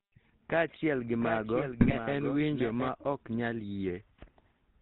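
From the start, the speech carries the GSM full-rate codec's signature: a buzzy, gravelly edge and nothing above 4 kHz, which fits the 13 kbps full-rate coder. Unlike a plain band-limit, the roughness comes from the pulse-driven excitation model, not just missing treble.

From 1.20 s to 2.88 s, just before "ok nyal", a doubled audio track appears: a full-band copy roughly 0.7 s behind and a few dB quieter, starting and stopping abruptly. Unlike an echo or reverb, it has no decay and no room colour, which points to a likely second, slower capture path or an out-of-step edit.

Within that stretch, from 1.80 s to 1.94 s, GSM bit errors break the speech into squawks, pops and gargling as corrupted filter, pitch and gain values reach the decoder over six frames. This is a brief burst of bent spectrum and blown-up level rather than the codec's steady roughness.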